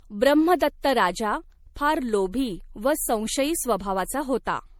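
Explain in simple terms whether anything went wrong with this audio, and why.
Something did go wrong, and it runs through the whole speech clip from start to finish. The sound is swirly and hollow, with a watery smear, and the starts of syllables are blurred instead of crisp. This is likely generation loss: the audio seems to have been squeezed into MP3 a few times over. Each round adds its own small damage on a shifted grid, so the harm builds up beyond what one rough save would leave.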